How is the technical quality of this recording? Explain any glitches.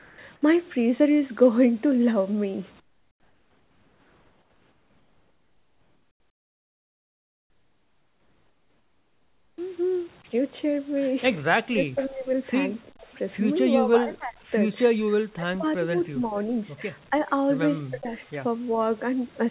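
It's a speech call with three kinds of trouble, all sitting on a narrowband line that tops out around 4 kHz, which fits G.711 at 64 kbps.

Comfort noise in place of the background shows up at 0 to 0.18 s and again from 2.8 to 9.58 s. The sender likely stopped transmitting in the pauses, so the real room tone gets swapped for flat synthetic hiss, about 3 dB and then about 14 dB quieter.

Speech gets suppressed in double talk at 11.72 to 12.3 s, 12.85 to 13.08 s, 13.8 to 16.53 s, 17.1 to 17.28 s, 17.89 to 18.21 s and 18.76 to 18.8 s. The echo canceller likely couldn't separate the talker from the far side and ducked everything. The voice dips or drops out, sometimes by around 40 dB.

There are two tiny echo leaks, at 12.02 to 12.09 s and 13.14 to 13.18 s. Leftover loudspeaker pickup likely slips past the canceller and comes back as very faint scraps of voice delayed by 363 ms.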